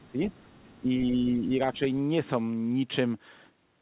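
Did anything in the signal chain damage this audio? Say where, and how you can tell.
Yes. In the call processing stage, the other side's voice leaks through from 0 to 0.09 s and again from 0.28 to 0.76 s, a faint separate voice about 30 dB under the speech. That is likely residual loudspeaker echo the canceller left behind. It is a different voice, not a delayed copy of the talker as reverberation would be.

The talker's own speech is also suppressed in double talk: it dips at 0.08 to 0.2 s by about 10 dB, then at 0.79 to 1.5 s and 1.73 to 1.81 s by about 5 dB. These are level drops, not silent gaps like packet loss. They likely come from an echo canceller ducking both talkers.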